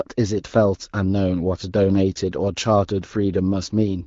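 No technical faults can be heard in this speech.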